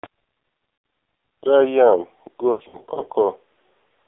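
AMR narrowband mobile codec, throughout: the speech sits in a telephone band of roughly 300 Hz to 3.7 kHz, with nothing above, and it sounds heavily buzzy and synthetic. The coder rebuilds each 20 ms frame from a vocal-tract filter fed by only a few pulses. At this level of damage, the sound fits a very low rate of about 5.9 kbps, so the pitch turns mechanical.

Lost AMR speech frames, 0.74 to 0.84 s: a 100 ms gap, which fits about five consecutive 20 ms frames, was filled by the decoder repeating the last good pitch and filter settings at falling gain. The speech briefly drones and sags before recovering, rough for a moment. From 2.52 to 3.03 s the losses are scattered, with about 220 ms missing and the longest run 80 ms. The result is a series of warbles and dips rather than one fade.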